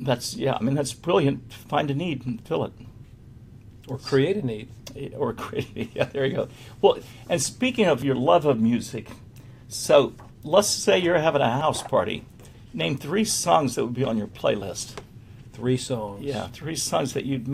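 Three short skips break up the audio, at 8.02 s, 11.61 s and 14.62 s. Each is heard as a sudden jump forward in the sound, and there is no gap of silence. The first loses about 10 ms, the other two about 20 ms each. The likely cause is a dropped buffer (overrun). The recording program fell behind, the hardware wrote over samples before they were collected, and the audio on either side was spliced together.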